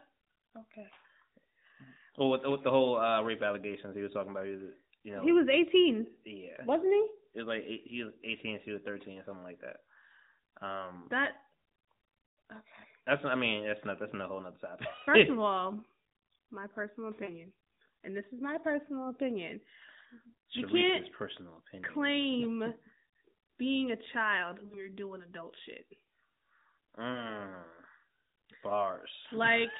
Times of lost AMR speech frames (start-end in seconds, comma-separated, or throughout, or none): 17.24-17.31, 24.66-24.82, 27.12-27.32